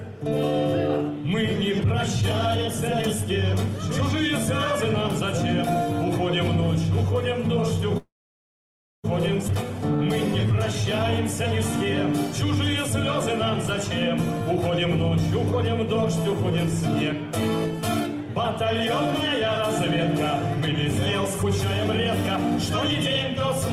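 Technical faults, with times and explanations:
7.97–9.06 s, call audio freeze: the sound stops being fresh and the last fragment is carried on briefly as a fading buzz, then about 940 ms of near-silence fills the rest of the 1.06 s hold. This is likely a run of packets held up in transit, leaving the jitter buffer empty. When delivery resumes, the audio picks up exactly where it left off, so nothing is lost, but everything after it now sits about 1.06 s later than before.
9.48–9.50 s, skip ahead: playback jumps forward with only a few milliseconds of fill at the join, and roughly 0.7 s of audio is simply gone. The two sides are spliced almost directly. This follows the freeze closely: a stretch was dropped, in transit or by the jitter buffer, pulling the delay back down by about 0.7 s, trading missing content for lower latency.
9.97–10.53 s, jitter buffer slow-down: over about half a second the audio runs at roughly 95% speed while the pitch stays put, so sounds are drawn out. 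The buffer was running low or had just raised its target delay, so the receiver repeated single pitch periods many times in a row, adding about 39 ms in total to rebuild a safety margin.
20.24–21.45 s, jitter buffer speed-up: across about 1.2 s the audio runs roughly 3% fast at unchanged pitch. Here the buffer held more audio than its target, so the receiver trimmed many short pieces, each one or a few pitch periods long, removing around 50 ms altogether to bring the delay back toward its aim.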